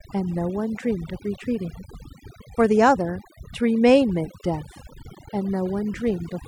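A speech clip with overdone noise removal throughout. The background drops and breaks up into twinkling specks. Quiet parts of the voice vanish.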